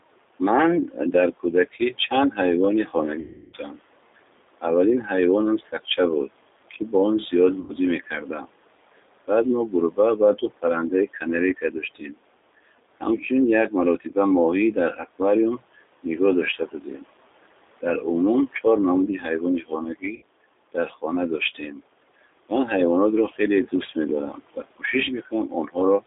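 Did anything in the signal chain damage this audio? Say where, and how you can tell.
Yes. Damage comes from call processing, the codec and the network.

Noise suppressor artifacts, from call processing, run through the whole clip. The room noise sits about 17 dB under the speech. Between phrases it drops by about 21 dB, then swells back when speech returns. The suppressor estimates the steady background and pulls down each band it judges to be noise, frame by frame.

The codec stage is G.729 throughout. The band is narrow, roughly 300 Hz to 3.7 kHz, with nothing bright above it. The speech has a plainly rough, synthetic edge. That points to G.729 at 8 kbit/s. This codec does not send the waveform. It sends a vocal tract filter, a pitch predictor and a few pulses per subframe. The decoder rebuilds an approximation, and the rough, synthetic texture is the price of that model.

Speech cut by the noise suppressor also comes from call processing. 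It appears from 0.39 s to 26.04 s, around five seconds in all. Quiet consonants and word tails vanish or go faint. The deepest dips reach about 22 dB. The suppressor mistook low-level speech for background and attenuated it along with the noise. Soft endings sound swallowed, as if the talker dropped off mid-syllable.

VoIP packet loss concealed by the speech codec is a network fault. It occurs at 3.20–3.55 s, 7.60–7.75 s and 20.16–20.24 s. The gaps are about 330, 90 and 60 ms. The first fits roughly eleven lost packets. In each gap the sound smears into a buzzy tone or coloured noise that fades. The decoder is repeating its last pitch and filter with falling gain. Because each frame builds on the previous one, the voice stays weak briefly after audio resumes.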